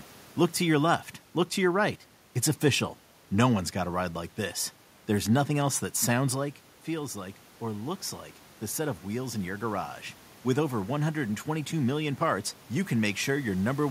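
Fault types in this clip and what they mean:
Automatic gain rising: After "nothing else that sounds", the input level drops by about 10 dB as the talker moves away, and the automatic gain control responds by slowly increasing its gain by about 4 dB between 6.35 and 9.96 s. Because the added gain applies to the whole signal, the voice and the room noise grow louder together over those three and a half seconds, rather than the voice alone recovering.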